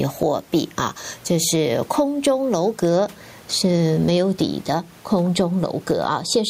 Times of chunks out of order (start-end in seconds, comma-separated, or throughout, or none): none